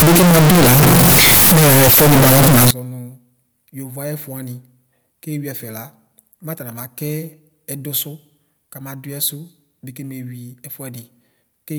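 From the start to about 2.71 s the speech comes through extremely loud and harsh, the waveform flattened into a near-square shape sitting at an almost fixed, high level, with background noise as prominent as the talker, though the pitch of the voice can still be followed. This is the signature of a float read as integer: 32-bit floating-point samples were likely interpreted as 32-bit integers, so sign and exponent bits dictate the level.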